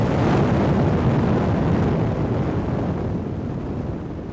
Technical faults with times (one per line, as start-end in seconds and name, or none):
none